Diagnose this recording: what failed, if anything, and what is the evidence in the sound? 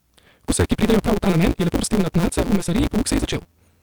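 The buffer handoff between two stages is broken: a block size mismatch with truncation, running the whole length of the speech. There's a steady buzz at 172 Hz, which fits the downstream stage reading 256-sample blocks, and the talker is rushed along at about 1.88 times normal speed while the pitch stays roughly where it should. The upstream side is handing over longer blocks than that, and each block's tail gets thrown away. So every chunk boundary makes a little discontinuity, and the lost audio shortens time without resampling.

Separately, the codec or storage path is dropping audio: compressed frames skipped at 0.48 s, 1.75–1.77 s and 2.84–2.86 s. Frames here are 46.4 ms, and the jumps grow, roughly two, five and then about ten frames. That's around 100 ms, 200 ms and 400 ms of speech simply gone.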